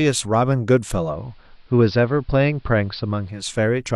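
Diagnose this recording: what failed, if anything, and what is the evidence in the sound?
The failure is at the radio receiver: digital radio blending to analogue. From 0.87 s the speech cross-fades over about 0.4 s into the station's AM broadcast, then returns to digital near 3.61 s. During that stretch the treble is cut back, and a faint hiss sits roughly 40 dB under the signal, while loudness stays level. On a spectrogram the top band goes dark between those times over a raised noise floor. The waveform envelope barely changes.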